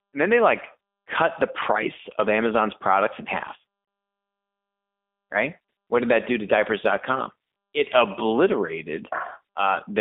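G.729 codec damage runs through the whole speech clip. It is plainly audible as a slightly rough, synthetic quality, which fits an 8 kbit/s codec. This codec rebuilds speech from a vocal tract filter, a pitch predictor and a few coded pulses per frame rather than sending the waveform itself. The line band is confined to roughly 250 Hz to 3.6 kHz, so there is no low body and no air above it.

VoIP packet loss concealed by the speech codec occurs at 3.85 to 3.88 s, just after "products in half". About 30 ms of audio is missing, which fits a single lost packet. The decoder fills it by extrapolating from its last pitch and filter settings at reduced gain, producing a brief buzzy tone or coloured noise in place of the real sound. Because each frame builds on the previous one, the sound stays weak or distorted for a short stretch after the gap.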